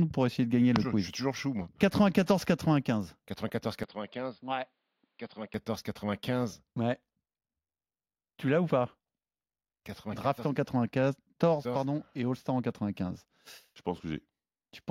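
From 3.84 to 5.54 s the speech turns dull and slightly quieter, with nothing above 5 kHz and a different background hiss, likely an input switched to a poorer device rather than a filter.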